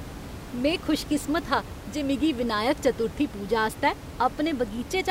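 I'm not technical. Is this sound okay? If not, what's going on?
Yes, nothing in the signal points to a technical problem, and the quiet background noise you may notice is just the sound of the room the microphone was in, sitting well below the speech.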